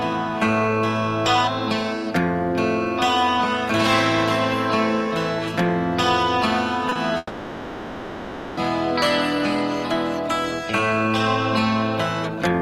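Two short concealed packet losses come back to back, at 6.89 to 6.93 s and 6.93 to 6.97 s. Each time about 20 ms of audio missed the decoder, which extended the preceding sound to fill the gap, leaving a quick smear or wobble.

A long network dropout then likely cut off incoming audio from 7.17 to 8.59 s. About 1.4 s never played. The receiver stretched the last sound across that span as a fading buzz or hiss before the signal resumed further on.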